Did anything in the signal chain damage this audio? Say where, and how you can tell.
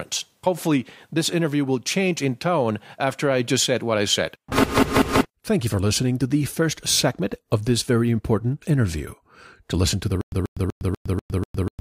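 Yes, at playback. From 10.21 s to the end there is a stutter with silent gaps. A 135 ms fragment repeats six times, separated by 109 ms of silence. A stalled stream likely kept replaying its last buffer.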